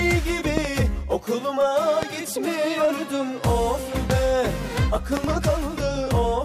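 Loud pops at 0.57–0.67 s (a double), 2.03–2.05 s, 4.10–4.12 s and 5.17–5.26 s (another double), each about 15 dB above the sound, likely voltage spikes from a switch, plug or static.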